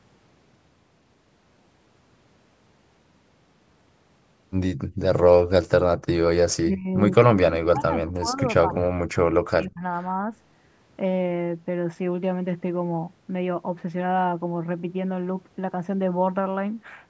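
Background gated by the echo canceller appears at 4.87 to 4.99 s in this speech recording: for roughly a tenth of a second the room sound drops by about 32 dB and then comes back. That is the canceller clamping the microphone hard while the far-end loudspeaker plays, treating everything it picks up as echo, then releasing once the playback stops. Speech suppressed in double talk follows at 6.61 to 6.9 s, 7.27 to 8.42 s and 8.61 to 9.83 s. The talker's level dips by around 25 dB in the first stretch and by around 40 dB in the two longer ones, each lasting about a second. The likely cause is both sides speaking at once, leaving the canceller unable to separate the near talker from the loudspeaker echo, so it attenuates everything together. The audio also passes through a call's microphone chain, with nothing above 8 kHz.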